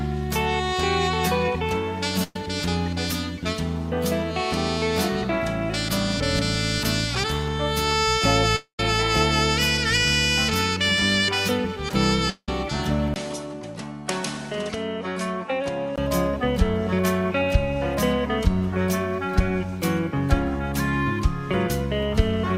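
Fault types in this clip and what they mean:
burst of packet loss: A short run of audio failed to arrive in time, and the receiver covered it by stretching the last sound for 117 ms before fading to a brief 20 ms hush at 2.23 s. About 120 ms of material is skipped, so the sound picks up slightly further along at 2.36 s. What separates it from a dropout is its brevity: the silence after the filled tail lasts only 20 ms.
long network dropout: At 8.56 s and again at 12.30 s the audio breaks off, most likely because the network stopped delivering it for a stretch. The first gap fills for 226 ms and then falls silent for 110 ms, losing about 230 ms of material; the second fills for 180 ms, goes quiet for 80 ms and loses about 180 ms. Unlike the short burst, the concealment runs out here and leaves audible dead air.
input switched to a poorer device: From 13.14 s to 15.98 s the sound turns duller and quieter, with nothing above 11.4 kHz, a drop of roughly 5 dB and a new noise floor sitting around 50 dB under the signal. 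The likely cause is the input jumping to a lesser microphone. A 20 ms gap marks the switch. Rather than skipping content as the network faults do, it changes tone and noise for a sustained stretch, then clears again.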